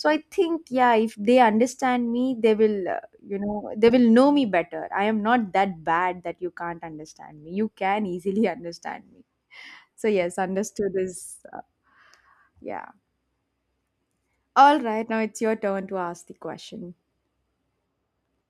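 Listening to this speech recording, nothing technical stood out.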